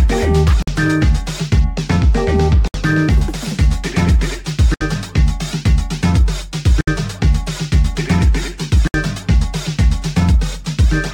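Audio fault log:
0.62–0.68, 2.68–2.74, 4.74–4.81, 6.81–6.88 and 8.88–8.94 s: gap at a join of encoded pieces. The sound drops out five times, about 51 ms on the first join and 67 ms on the rest, then resumes exactly where it left off. It looks like 2-second chunks were encoded separately and butted together untrimmed, so each join keeps the encoder's start-up silence and last-frame padding. The codec smears the edges, so the silent part is shorter than the full gap.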